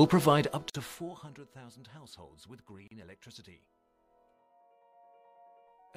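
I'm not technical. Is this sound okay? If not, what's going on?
No. Around 0.70 seconds and again around 2.88 seconds, the sound drops out for a tiny moment and then carries on. That is a gap at a join of encoded pieces: the clip was saved in separate chunks and stitched together untrimmed, leaving short silences of about 47 and 38 milliseconds.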